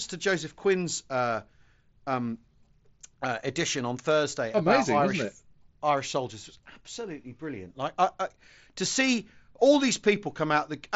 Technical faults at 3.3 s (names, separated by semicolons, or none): none